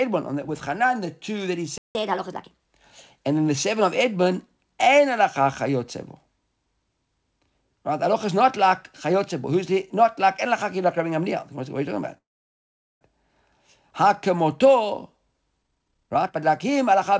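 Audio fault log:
1.78–1.95 s, playback stall: the speech cuts out mid-flow for about 0.17 s, then resumes where it left off. That's most likely the player running dry or its thread getting blocked, so nothing was coming out until it recovered.
1.95–2.64 s, catch-up at higher speed: right after the dropout the speech runs at 1.25 times normal speed, pitch lifted by roughly four semitones, as the player resamples its backlog to win back lost time, then it settles back to normal.
12.18–13.03 s, call audio freeze: the last sound hangs on as a fading buzz or hiss, then about 0.8 s of silence, before the speech picks up exactly where it stopped. Likely delayed packets emptying the jitter buffer; the gap is inserted, nothing lost.
15.62–17.20 s, jitter buffer speed-up: the speech sounds hurried, running at about 145% of normal speed while the pitch stays put. The receiver is trimming short pitch-period chunks over and over, roughly 0.7 s in total, to shrink the excess delay.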